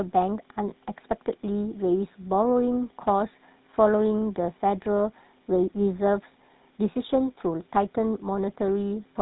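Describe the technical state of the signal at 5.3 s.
GSM full-rate codec damage is present at 5.3 s, as it is through the whole clip. The coder models the vocal tract as a filter and excites it with a sparse train of regularly spaced pulses, discarding two of every three excitation samples, so the fine structure of the speech is rebuilt coarsely. The result at this point is a plainly audible buzzy, gravelly roughness with nothing above 3.8 kHz, consistent with a 13 kbps channel.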